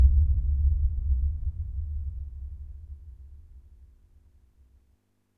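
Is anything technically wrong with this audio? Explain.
No, nothing technically wrong turns up here; the audio holds together fine the whole way.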